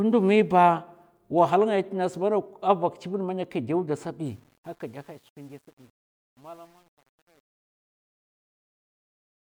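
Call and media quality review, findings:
Truncation distortion on the fade-out of the speech, 4.26 s to end, gritty, worst from 5.05 s to 9.59 s. Probable component: undithered gain or fade stage, consistent with about 9-bit output. Quiet tail collapses to coarse steps. Waveform: staircase squares. Spectrogram: broadband hash. Fade starts around 4.3 s.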